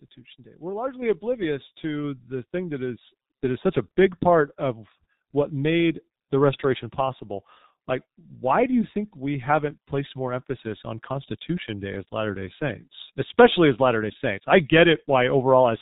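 From the start the speech sounds muffled and hoarse, with smeared consonants and nothing above 4 kHz, the mark of the G.723.1 codec, heavily damaged and consistent with about 6.3 kbit/s. At 1.02 s voice and background jump up together by about 5 dB: the microphone volume stepped up as the call software raised the input level in one step.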